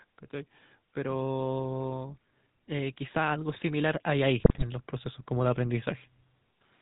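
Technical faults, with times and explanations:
Throughout: GSM full-rate codec. The speech has a plainly audible buzzy, gravelly roughness, and nothing above 4 kHz comes through. The codec rebuilds the vocal tract from a coarse pulse excitation that keeps only every third sample, which fits a 13 kbps stream.
0.93 to 5.93 s: automatic gain rising. Voice and background swell together, slowly climbing by about 10 dB over five seconds. The gain control judged the input too quiet and kept raising its gain step by step, so everything grows louder in unison.
4.40 to 4.64 s: GSM bit errors. The speech breaks into squawks, pops and gargling for about a quarter of a second. Flipped bits corrupted the filter, pitch or gain values the decoder relies on, which fits roughly eleven damaged frames.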